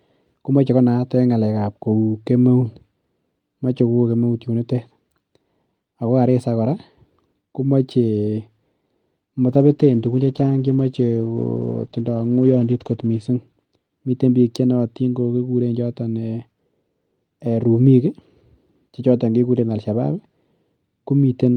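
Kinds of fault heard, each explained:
Call bitrate drop: From 9.49 s to 13.29 s the speech turns coarse and watery and loses its upper frequencies, holding at its worst for about 3.7 s before clarity returns. The encoder was starved of bits after the call's bandwidth estimate fell, which fits a drop from 48 kbps to about 14 kbps. Unlike packet loss, nothing drops out or stutters. The sound stays continuous but degraded throughout the stretch, then recovers.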